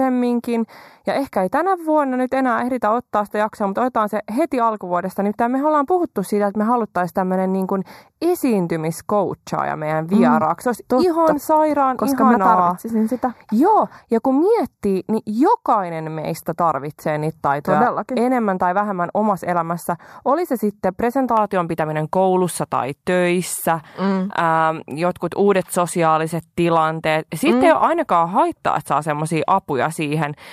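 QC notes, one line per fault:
0.00–21.37 s, channel delay (comb filtering): one channel arrives a fraction of a millisecond late, only a few samples, and the two are summed to mono. Content common to both cancels at evenly spaced frequencies, with the first notch near 3 kHz and further notches higher up, so the speech sounds hollow and phasey. On a spectrogram this appears as steady dark horizontal bands at fixed frequencies that stop at 21.37 s. The waveform shows little visible change.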